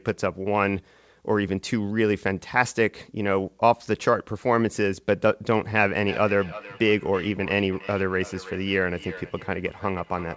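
From 5.98 s to the end, feedback echo between two devices repeats the speech about every third of a second, up to about 17 dB below it, at a fixed spacing rather than a smeared room tail.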